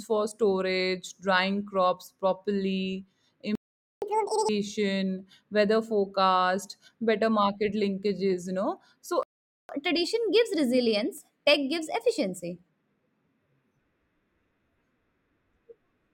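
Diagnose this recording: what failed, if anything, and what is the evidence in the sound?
The playback stage likely ran out of buffered data or had its thread blocked, so output went silent twice: the speech cuts off at 3.55 s for 0.47 s and again at 9.23 s for 0.46 s, then resumes. These are playback stalls.

After each stall the player used catch-up at higher speed, resampling its backlog faster to recover lost time. From 4.02 to 4.49 s the speech runs at 2x speed, about 10 semitones sharp. From 9.69 to 12.69 s it runs at 1.15x, roughly 2 semitones high, before returning to normal.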